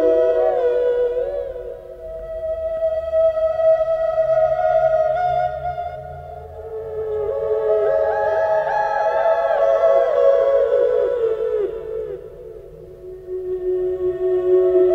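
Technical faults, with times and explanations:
No technical faults can be heard anywhere here.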